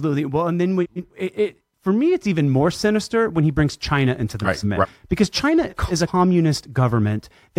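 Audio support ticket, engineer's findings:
Frames out of order, probably in the jitter buffer or depacketiser. Adjacent frame runs were swapped and decoded that way. Blocks of 139.3 ms and 185.8 ms fit 3–4 frame runs. Heard at 0.83–1.12 s (after "and then", before "it it for me"), 4.44–4.86 s (after "into the") and 5.69–6.09 s. Halves play exchanged, producing a garbled flutter. No time is lost.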